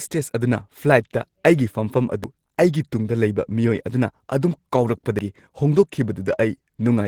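At 2.24 s and again at 5.19 s the speech skips forward with no gap of silence: audio missing between chunks, likely a short slice of about 50 ms lost as each 3-second chunk closed. A waveform shows an abrupt seam, and the spectrogram a vertical discontinuity.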